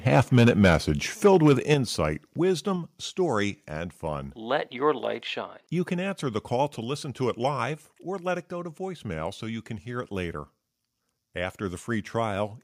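Microphone overload at 0.15 to 0.75 s, about 8 dB over, and again at 1.25 to 1.74 s, about 5 dB over: the speech peaks are flattened, around 5 and 2 percent of samples, giving a harsh crackle, likely from excessive input gain. Microphone volume stepped down at 1.74 s by about 7 dB, right after the second distorted stretch, then at 2.76 s by about 3 dB, and at 6.84 s by about 1 dB, between "answer the call to" and "to it live or". Each is a sudden drop in voice and background together, likely the call software lowering the input gain in one step.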